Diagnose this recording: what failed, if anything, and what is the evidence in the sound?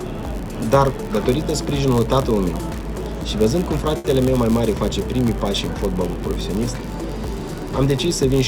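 A block size mismatch (padded) in the driver or buffer stage: zero-filled gaps in every block give a steady 91.5 Hz buzz and stretch the sound about 0.4% slower, with timbre unchanged.

A short stall from a late packet on the network side, 3.97 to 4.06 s: the jitter buffer emptied, so the last sound was held about 70 ms, then resumed with nothing lost.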